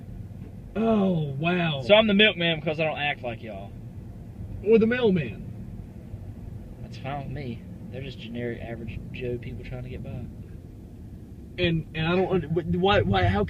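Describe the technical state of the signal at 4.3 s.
At 4.3 s the signal is intact, with no audible dropout, distortion, glitch or other technical fault at that point.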